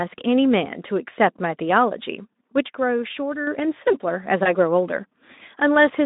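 At 4.43 s the speech briefly smears into a short buzzy, fading tone that takes until about 4.52 s to recover. This is VoIP packet loss concealed by the speech codec: a missing 20 ms frame was filled by extrapolating the Speex decoder's last pitch and filter, and later frames stayed weak while that state rebuilt.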